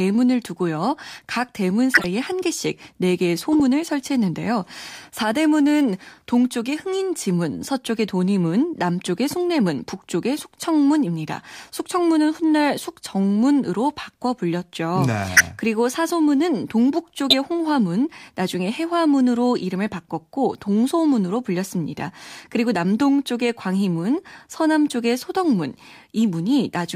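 Corrupt frames were decoded at 1.94–2.05 s, 3.52–3.60 s, 15.35–15.41 s and 17.30–17.34 s. Damaged bits in each run of frames put energy at wrong frequencies, briefly breaking the speech into an odd chirp, blip or burst of noise.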